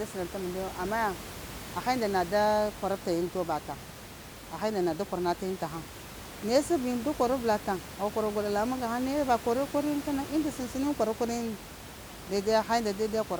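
A speech recording with nothing technically wrong with it, and the room noise sits about 14 dB below the speech.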